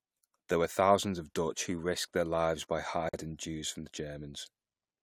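A gap at a join of encoded pieces opens at 3.09 s and lasts until 3.14 s, right after "risked their lives by". The speech drops out in a 44 ms gap whose edges are smeared by the codec, so the silent part is shorter, then resumes exactly where it left off. Separately encoded segments were butted together untrimmed, so the encoder's start-up delay and the padding on the previous piece's final frame both remain as silence at the seam.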